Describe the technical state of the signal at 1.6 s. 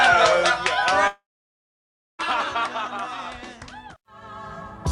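A likely long network dropout from 1.07 to 2.22 s stopped audio arriving; after a brief fading fill, only silence remains at 1.6 s.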